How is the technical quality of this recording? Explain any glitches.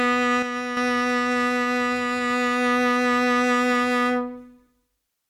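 The recording has one clear glitch near the start; it is music, and the fault is brief.

One channel drops out from 0.42 s to 0.77 s, about a third of a second. The music suddenly falls by about 6 dB, then snaps back to full level. The likely cause is one side of the stereo pair being lost: when the two channels are combined, the shared material halves in level, and anything carried only on the missing side vanishes until it returns.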